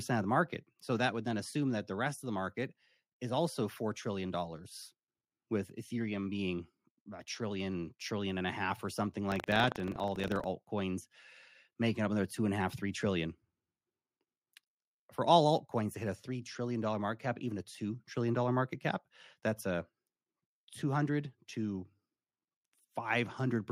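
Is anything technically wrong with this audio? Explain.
Yes. Buffer tearing from 9.28 to 10.46 s: the writer and reader of the playback ring buffer have slipped, so each 40 ms period carries a small slice of stale audio, roughly 70 ms old, producing a robotic 25 Hz buzz over the speech.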